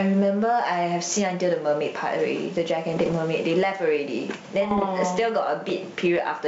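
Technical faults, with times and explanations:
Throughout: gain pumping. The level swings by roughly 15 dB as a fast limiter likely clamps over-high gain, so loud and soft parts end up closer in level and the sound is squashed.
2.92 to 3.13 s and 4.62 to 4.86 s: bit errors on an ADPCM link. Flipped bits, around 0.3 to 0.4 percent, derail the decoder's step size and predictor, giving pops, rough bursts and brief level jumps.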